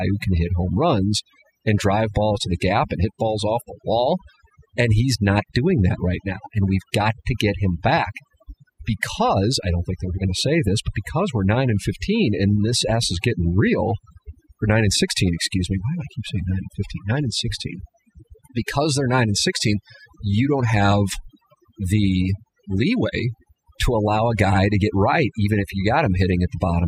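Overdone noise removal runs throughout: over-strong suppression zeroes bands near the noise estimate, leaving a background that drops and breaks up and a spectrogram of black gaps flecked with isolated twinkling specks.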